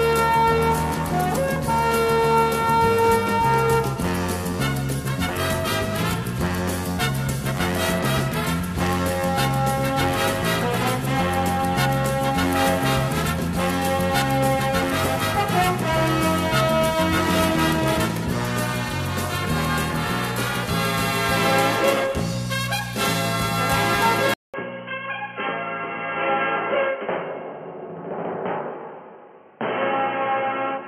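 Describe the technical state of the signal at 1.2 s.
At 1.2 s the signal is intact, with no audible fault at that moment.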